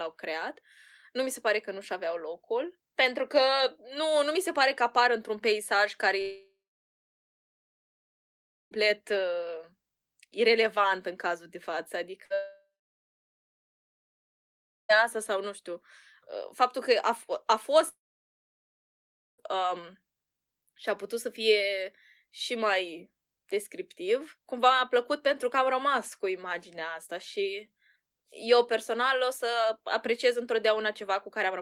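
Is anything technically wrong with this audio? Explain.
Yes. The speech cuts out several times.

From 6.21 to 8.73 s, just after "peisaj care", the last sound turns into a brief fading buzz or hiss and then about 2.2 s of silence before speech resumes further on. This is likely a long network dropout: roughly 2.5 s of audio never arrived, and the receiver could only extend the final sound briefly.

At 12.25 to 12.32 s, right after "în cazul de față", there is a short held buzz or fading hiss, and about 60 ms of speech is skipped. This is a burst of packet loss, where the receiver stretched and faded the last sound to cover the gap.

Moments later, from 12.34 to 14.95 s, there is another fading tail followed by about 2.2 s of silence, and speech returns at "asta sau nu știu". This is likely a second long network dropout, losing about 2.6 s.

From 17.88 to 19.40 s, the sound briefly trails off into about 1.4 s of silence. 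This is likely a third long network dropout, with about 1.5 s of speech missing.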